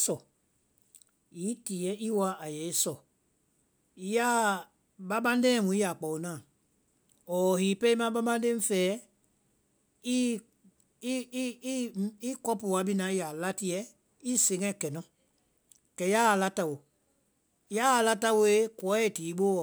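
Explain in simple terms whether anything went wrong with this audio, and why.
Sample clock jitter sets in at 16.67 s, just after "kɛ yaa a la", and lasts to the end. The converter's timing clock wobbled by a few microseconds, so the speech picks up a rough hiss that grows on loud, bright sounds and vanishes in pauses.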